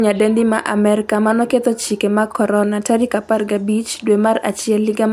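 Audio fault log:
No audible faults found.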